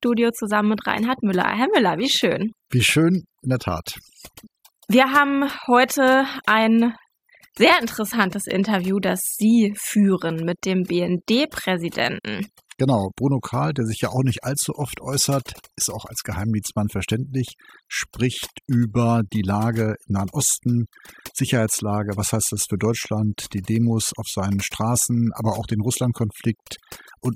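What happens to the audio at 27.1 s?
At 27.1 s the speech is still under overdone noise removal, which runs through the whole clip rather than starting or stopping there. The noise reducer was set far too aggressively, so any frequency band it judges close to the noise floor gets pulled right down or gated off, taking the softer parts of the voice with it. The gaps fall to near silence dotted with twinkling specks.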